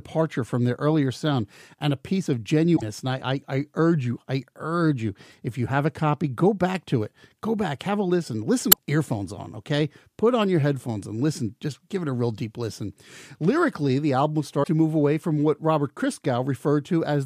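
At 2.73 to 2.83 s, 8.69 to 8.79 s and 14.60 to 14.68 s, damaged data in the compressed stream throws the decoder out of sync. Each roughly 0.1 s glitch briefly interrupts the speech.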